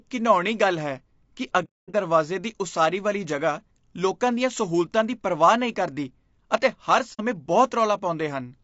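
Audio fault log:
throughout, low-delay AAC compression: The speech has a rough, grainy texture, with a hiss sitting between the pitch harmonics and a top end that sounds thin and a bit synthetic. The likely cause is AAC-ELD, the low-delay AAC used in video calls. Its very short frames can't separate voice harmonics cleanly, so the coder spends bits inefficiently. At a rate that fits something around 32 kbps, there aren't enough bits left to keep the voice smooth.
1.64–1.95 s, AAC frame loss with muting: Over about 0.3 s the sound drops out in a cluster of holes totalling about 270 ms, the longest about 0.2 s. This fits the decoder zeroing the spectrum of lost frames. Because the overlapping windows fade the audio out and back in, the gaps have soft edges.
7.13–7.21 s, AAC frame loss with muting: There's a shorter hole of about 60 ms, which points to a couple of lost frames muted the same way. 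It also fades softly in and out.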